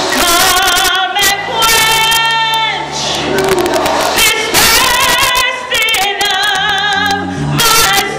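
Violent, sharp cracks burst out on the loudest peaks across the whole clip, far harsher than ordinary clipping: integer overflow. The signal was driven about 5 dB too hot, and the small fraction of samples above the limit wrapped to the opposite extreme instead of being held there.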